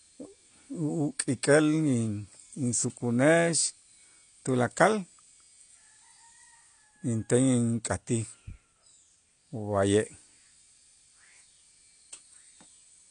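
A speech recording that has most likely been squeezed through AAC compression at a low bitrate, with the damage plainly audible for the whole clip. Nothing survives above about 9.8 kHz, a cut-off that fits AAC-LC running at around 32 kbps, where the encoder drops the upper spectrum and starves the remaining bands of bits. The voice comes across dull and smeared, with a fizzy, warbling texture on sibilants and held sounds.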